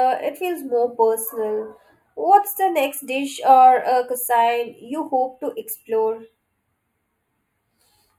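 Speech, with channel delay (comb filtering) throughout. One channel lags by a few samples, about a tenth of a millisecond. Summed to mono, shared content cancels at evenly spaced frequencies. The first notch falls near 5 kHz. The upper range sounds hollow and phasey.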